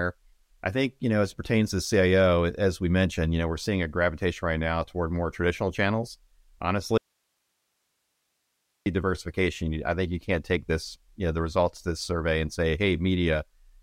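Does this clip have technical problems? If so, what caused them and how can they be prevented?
Yes. Between 6.98 and 8.86 s the speech cuts out abruptly, leaving only hiss roughly 50 dB down until "diversification I think you". This audio dropout to a faint residue is likely an upstream signal loss while the later path stayed live. Secure cables and monitor wireless links to prevent it.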